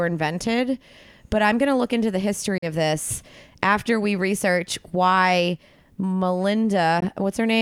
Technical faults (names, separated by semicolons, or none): Bluetooth dropout